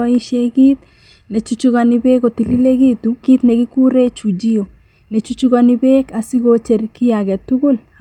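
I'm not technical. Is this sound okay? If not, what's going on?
No. At 3.23 to 3.25 s, right after "kit nechuchukani beek kotililekitu", there is a skip ahead: roughly 0.7 s of speech was thrown away and the two sides were joined directly. Unlike a dropout, there's no silent gap, just a sudden jump forward.

From 3.33 to 5.21 s comes a jitter buffer speed-up. The system was holding too much speech, so it trimmed tiny slices, about a fifth of a second in all, making the talking run about 11% faster. The voice keeps its normal pitch, not higher or chipmunk-like, but sounds rushed.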